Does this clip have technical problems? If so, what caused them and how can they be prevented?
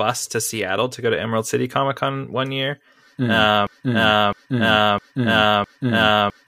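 Yes. At 3.67 s the speech turns into a broken-record loop that lasts to the end. A 0.66 s fragment repeats exactly, back to back, four times. The likely cause is a stalled player or stream resending its last buffer, so the real audio is lost. Monitoring for stalls and recovering the buffer promptly would prevent it.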